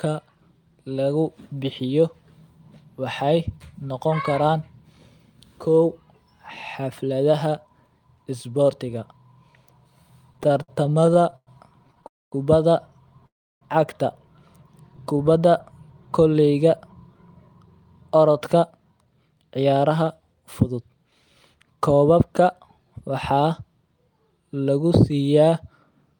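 Repeated stalls (stutter) run from 10.33 to 12.05 s: late packets kept emptying the jitter buffer, so the speech halts 22 times, with gaps up to 108 ms, dragging unevenly.

A call audio freeze follows at 12.07–12.34 s and again at 13.27–13.63 s. Packets were likely held up in transit, so the sound briefly continues, then drops to silence before resuming where it stopped.

A jitter buffer slow-down at 14.90–15.51 s repeats pitch periods to rebuild reserve, adding 83 ms. The speech plays at 88% speed, drawn out at unchanged pitch.

A jitter buffer speed-up from 17.14 to 23.11 s trims short pitch-period pieces to shed excess delay, roughly half a second. The speech runs at 108% speed and sounds hurried, its pitch unchanged.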